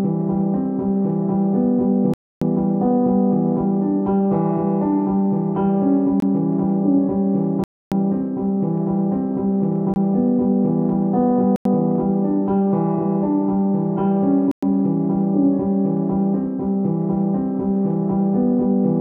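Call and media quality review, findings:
Block of digital silence, six dropouts: 2.14–2.42 s and 7.64–7.92 s (both about 279 ms, clear holes), 6.20–6.22 s and 9.94–9.96 s (about 22 ms and 21 ms), 11.56–11.65 s (93 ms, fits a 4096-sample block), 14.51–14.63 s (112 ms). Hard cuts to silence and back with no fade. Probable component: the output buffer not getting filled in time, with zeros going out instead.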